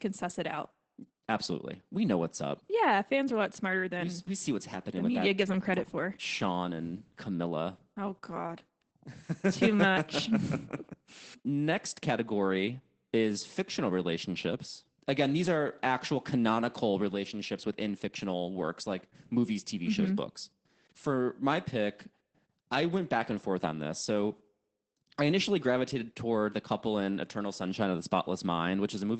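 From start to finish the speech sounds muffled, hoarse and faintly robotic, with no content above 16.4 kHz. This is Opus voice compression, which fits a low bitrate around 12 kbps in SILK mode, coding the voice excitation coarsely through a wideband coder.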